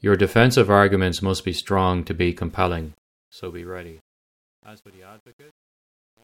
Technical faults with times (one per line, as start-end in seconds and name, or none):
2.50-6.23 truncation distortion on a fade